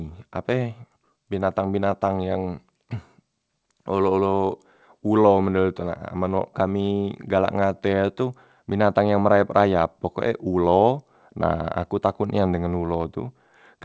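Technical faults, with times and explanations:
No faults found; the speech has passed through a WebRTC call path, with nothing above 8 kHz, consistent with G.722 wideband coding at 64 kbps.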